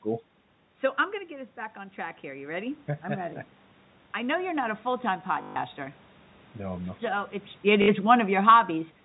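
From 1.11 to 3.42 s the automatic gain rising fault appears. Just after the talker seems to move back from the microphone around 1 s, the input falls by about 13 dB, and the gain control slowly adds about 9 dB to compensate. Voice and room noise swell together over roughly two seconds. On a spectrogram the whole picture, including the noise floor between phrases, brightens gradually. On a waveform the envelope ramps up steadily instead of jumping.

Packet loss with last packet repeated occurs twice. The first runs from 5.42 to 5.56 s, right after "not a full time", lasting 140 ms. The second runs from 7.82 to 7.88 s, after "it's it", lasting 60 ms. In each gap the receiver replays one short block of audio whose length fits 20 ms packets. Each run buzzes at about 50 Hz, a brief robotic stutter. On a spectrogram this shows as identical slices tiled every 20 ms with faint vertical lines at the joins. 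The waveform shows one segment copied with small breaks between copies.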